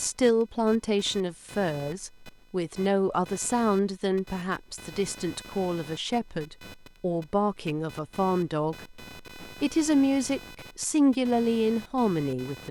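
Computer activity noise runs throughout: the computer's load changes disturb the shared audio ground, adding a buzzy pulse near 500 Hz, roughly 20 dB below the speech.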